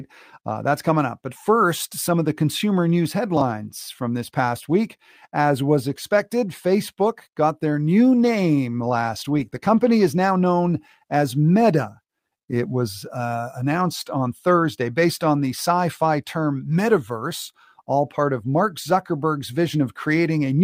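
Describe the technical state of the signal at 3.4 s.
Chunks out of order at 3.37 to 3.41 s: an 11 ms chunk plays late, apparently three chunks behind its place, so three hard joins produce a brief jumbled moment.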